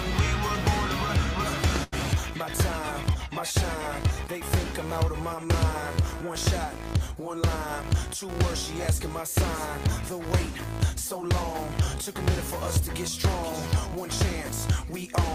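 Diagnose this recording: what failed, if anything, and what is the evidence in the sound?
The network stage failed: a burst of packet loss hit the stream from 1.83 to 1.94 s. A run of consecutive packets never arrived in time, so the receiver filled about 86 ms by extending the last audio it had and letting it decay, heard as a held, fading tail where the sound should continue. When playback picks up again, roughly 80 ms of the original audio has been skipped, leaving an audible jump forward.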